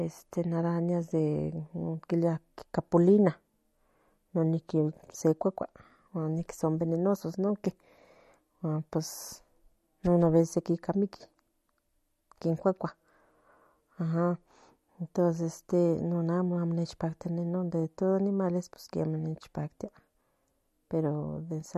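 Throughout, the speech is dull above 13.3 kHz and swirly, with metallic chirps on s sounds, likely MP3 compression near 48 kbps; unlike plain low-pass filtering, the watery warble marks it.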